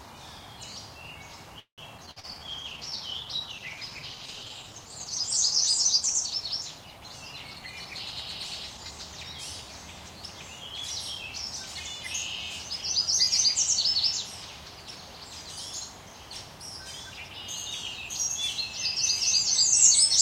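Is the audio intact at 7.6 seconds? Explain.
No. At 7.6 seconds two faults overlap.

A call bitrate drop runs from 2.43 to 9.20 s. The bandwidth estimate fell, so the encoder cut its rate from 96 kbps to 16 kbps. It stays at the lowest rate for about 3.5 s. At that rate the codec quantises coarsely and trims the high frequencies. The sound turns muffled and rough, with a watery, smeared texture.

A jitter buffer speed-up also spans 7.51 to 7.92 s. Too much audio had piled up in the buffer. The receiver shortened the backlog by cutting many small pitch-period slices, around 70 ms in total. Playback runs at about 118% speed with no change in pitch. The sound feels briefly hurried and clipped in its timing.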